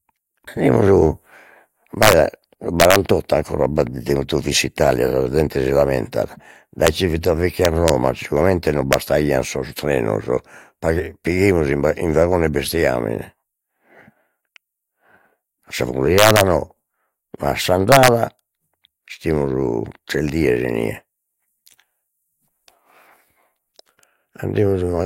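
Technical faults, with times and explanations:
2.03–2.13 s, 2.80–2.96 s, 6.87 s, 7.65–7.89 s, 8.93 s, 16.18–16.41 s, 17.92–18.08 s: integer overflow, speech peaks running up to about 3 dB past full scale wrap to the opposite sign instead of limiting, causing violent cracks.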